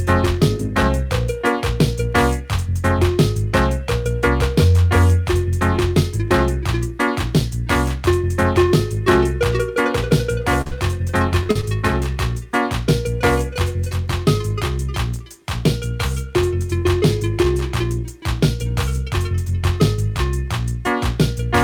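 Around 10.6 s there's a cluster of short concealed packet loss, where chunks of audio didn't reach the decoder in time and the receiver patched the gaps. Two losses run back to back from 10.61 to 10.73 s, then three quick ones hit at 11.43, 11.51 and 11.61 s, each only 20 to 40 ms long, which fits 20 ms packets. The decoder carried the preceding sound forward and blended back, so you hear brief smeared or wobbly patches rather than clean dropouts.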